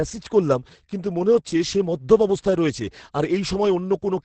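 Opus voice compression runs throughout the speech, with nothing above 8.7 kHz. The linear-prediction coding of the excitation is heavy, pointing to a bitrate near 10 kbps, so the voice sounds muffled, hoarse and faintly robotic from start to finish.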